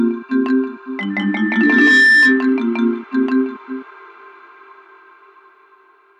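From 1.10 to 2.54 s a loudspeaker feedback squeal appears: the microphone re-amplifies its own loudspeaker output, so a 1.8 kHz tone swells over roughly a second to sit about 5 dB above the sound. On a spectrogram it is a single bright horizontal line.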